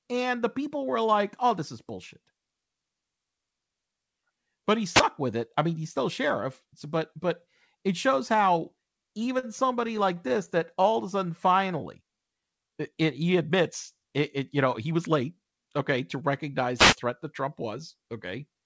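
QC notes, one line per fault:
4.92–5.03 s and 16.77–16.96 s, wireless microphone noise hit: each time, the radio link from the analogue FM microphone faded as reflected signals cancelled the direct path, and the receiver's own noise surged up to fill the gap. The first lands just before "with it I mean" and lasts about 0.12 s; the second runs about 0.19 s. Both come through as a brief swish or burst of static laid over the speech.
9.39 s, short stall from a late packet: a packet missed its playout moment and the jitter buffer emptied, so the receiver held the last sound for about 39 ms until the packet turned up, then carried on from the same point. Nothing is lost, but the end-to-end delay grows by those 39 ms, and the speech hangs on one sound for a moment with a faint buzz or dip in the held part.
9.87–10.86 s, repeated stalls (stutter): packets kept arriving late, so the buffer ran dry seven times in under a second. 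Each gap was bridged by extending the previous sound, about 75 ms of fill in total, with the longest single gap only 16 ms. Because no audio was dropped, the result is a dragging, hiccuping delivery rather than holes, with roughly 8% of that stretch synthesised.
10.66–12.95 s, jitter buffer slow-down: with its reserve running low, the receiver rebuilt it by repeating individual pitch periods and slivers of pauses over and over, adding about 164 ms. The speech up to "it he admits it" plays at about 93% speed yet keeps its pitch, so sounds are drawn out.
14.91–16.23 s, jitter buffer speed-up: after "it you know he" the buffer was holding more audio than its target, as happens when delayed packets arrive in a bunch. To bring the delay back down, the receiver cut out short runs of one or a few pitch periods, around 150 ms in all. The speech runs at about 110% speed with unchanged pitch, sounding rushed.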